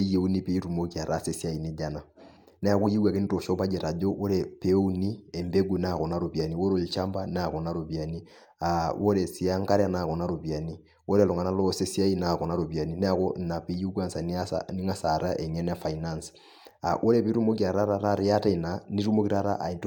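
No technical faults are audible anywhere in the speech.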